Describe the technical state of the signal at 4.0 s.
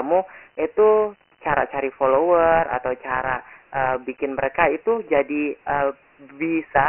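At 4.0 s the signal shows Dialogic VOX ADPCM damage, which runs through the whole clip rather than starting or stopping here. The speech has been squeezed into 4-bit adaptive differential samples, whose coarse steps leave a gritty hiss riding on every syllable, and the damage is heavy. There is nothing above 3.1 kHz, consistent with a 6,000-sample-per-second stream at 24 kbps, on top of a telephone band running from 300 Hz to 3.5 kHz.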